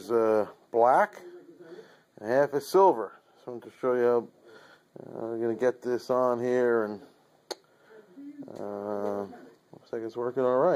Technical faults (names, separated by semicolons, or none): none